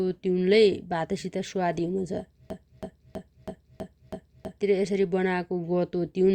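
From 2.50 s to 4.61 s the speech falls into a broken-record loop: a 0.32 s fragment repeats exactly six times, back to back, likely from a stalled player or stream resending its last buffer. The intended speech there is lost. Waveform and spectrogram show identical blocks tiled side by side.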